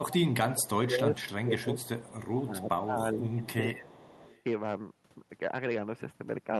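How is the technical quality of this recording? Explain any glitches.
The recording has clear call-quality problems: the speech repeatedly dips and breaks up, and a faint delayed copy of it trails behind in several places.

Speech suppressed in double talk occurs from 0.00 to 0.14 s, 0.54 to 1.54 s and 2.30 to 3.91 s. The speech level drops in pieces, by around 20 dB in the first two stretches and around 15 dB in the third, so the voice sounds pumped and partly cut out. The likely cause is that both ends were talking at once and the echo canceller, unable to separate the near talker from loudspeaker echo, attenuated everything.

An echo leak is heard at 0.11 to 0.16 s, 1.59 to 2.52 s, 3.31 to 3.48 s and 3.88 to 4.42 s. A repeat of the voice arrives 392 ms late. It is loudest, about 15 dB below the speech, in the brief first instance and much quieter, well below the speech, in the later ones. 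This likely comes from a loudspeaker-playing end whose echo canceller let part of the microphone pickup through and sent it back down the call.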